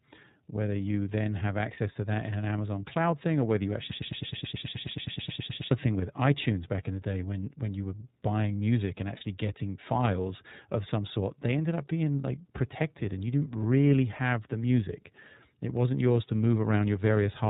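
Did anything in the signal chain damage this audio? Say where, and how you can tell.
Yes. The iLBC codec stage colours the whole clip. Nothing above 4 kHz survives, so the speech sounds narrowband and telephone-like, and the coding damage is plainly audible as a rough, slightly synthetic grain on voiced sounds. iLBC codes each frame's excitation on its own, with no help from the previous frame, so this texture is even throughout rather than building up. The character fits the 13.33 kbps mode with 30 ms frames.

Lost iLBC frames appear twice, as network-stage packet loss. The first is at 1.73 to 1.78 s, between "whether you then have" and "to that in an". The second is at 9.17 to 9.22 s, between "were buying music and" and "getting files of some". Each gap is filled by a short, held, faintly buzzy tone: the decoder repeats the last pitch cycle mixed with noise to cover about one 30 ms frame. 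Because iLBC frames stand alone, clean speech resumes at once.

A broken-record loop runs from 3.92 to 5.71 s, after "thing or whether you" and before "thing with". A fragment about 0.11 s long repeats exactly, back to back, about 17 times, and whatever should have played in those 1.8 seconds is gone. The likely cause is a stall in the player, encoder or stream buffer that kept re-sending the last fragment it held instead of fresh audio.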